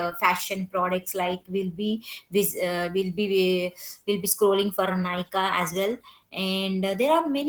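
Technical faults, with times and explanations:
Throughout, Opus voice compression: the speech sounds muffled, slightly hoarse and faintly robotic. This fits Opus in hybrid mode at a bitrate near 16 kbps, where a linear-prediction coder handles the band below 8 kHz with coarse excitation and a thin transform layer sketches the top. On a spectrogram, harmonics below 8 kHz look smeared and grainy, while energy above 8 kHz appears patchy and blocky in steps that suggest 20 ms frames.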